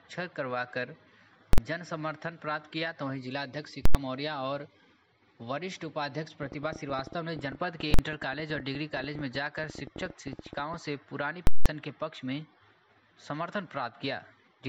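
The audio has two problems. There are four bursts of invalid numbers at full scale, at 1.53–1.58 s, 3.85–3.95 s, 7.94–7.99 s and 11.47–11.66 s. Each time the output sits flat at one extreme value far beyond the audio's peaks, giving a very loud pop in and out with no sound between, or a single bang for the shortest ones, and the lengths fit blocks of 2048, 4096 and 8192 samples. From 6.43 to 10.75 s there's also a train of clicks, about 13.2 per second at an uneven pace, sitting well above the sound. That's likely interference or a faulty connection or power supply.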